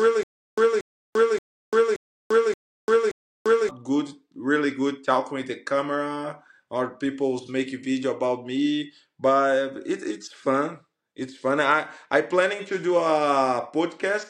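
From the very start until 3.69 s, the audio stutters with silent gaps: the same 0.23 s burst repeats six times, each followed by about 0.34 s of dead digital silence, recurring every 0.58 s. The player or stream likely stalled, replaying its last fragment at each retry, so the intervening audio is lost.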